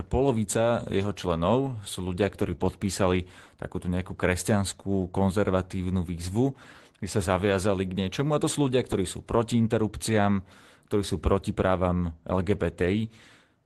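Right after "sú ľudia", from 2.43 to 2.53 s, there is a lost packet rebuilt from error correction. Three separate packets were lost, and the decoder replaced about 60 ms with low-bitrate redundant copies carried in the following packets. That span sounds rougher and noisier, but there is no gap.

At 2.55 to 2.59 s comes a short concealed packet loss. About 20 ms never arrived, so the receiver extrapolated from the preceding sound and blended back into the real audio. It registers as a brief smear just before "podpísali takúto nejakú kresťanskú".

At 2.59 to 2.61 s, another 20 ms frame is rebuilt from error correction, adding a final moment of coarse, grainy texture. All of this sits on the Opus call path, whose roughly 12 kHz band limit and coding noise fit a rate near 24 kbps.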